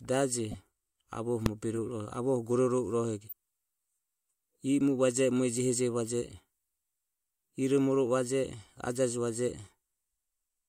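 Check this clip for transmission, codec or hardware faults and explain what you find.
Two kinds of fault are present in the speech: decoded corrupt frames in three places and one full-scale invalid-number block.

Corrupt frame decoded at 0.51–0.55 s, 1.76 s and 3.28–3.33 s, the last just after "gororovo irohego". Damaged bitstream frames were decoded regardless, so misread gains and codes misplace spectral energy. Each is a brief chirp, squeak, blip or burst of noise, peaking around −25 to −30 dBFS.

Invalid numbers at full scale at 1.46 s. A calculation produced infinite or invalid values, which clipped to maximum amplitude for a 1.33 ms block, consistent with a 64-sample processing block. Because the block is so short, it is heard as a single sharp bang.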